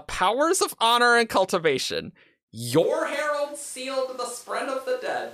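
At 2.84 s the speech suddenly turns roomy and hollow, and it stays that way to the end. The bass thins out. The level drops by roughly 10 dB. Background room noise becomes audible, sitting around 30 dB below the speech. This points to a switch to a distant microphone. The close microphone's signal was likely lost or left out, leaving a microphone further away, such as a camera's, to pick up the room.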